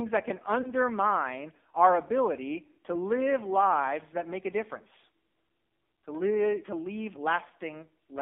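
Throughout, the speech passes through the AMR narrowband mobile codec at a heavy compression setting, which fits a low mode of about 6 kbit/s. Its pulse-driven vocal-tract model leaves the voice buzzy and synthetic, confined to roughly 250 Hz to 3.6 kHz. At 0.62 to 0.72 s, just after "that can", lost AMR speech frames force the decoder to repeat its last pitch and filter settings at reduced gain, producing a brief warbling dip consistent with about 20 ms missing. At 7.48 to 7.53 s, after "to live to leave", a longer loss of about 40 ms stretches and fades the sound before it returns rough.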